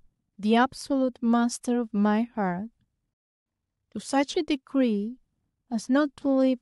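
At 3.14 s the speech hits a rebuffering stall: the player runs dry, goes silent for about 0.32 s, then picks up exactly where it stopped.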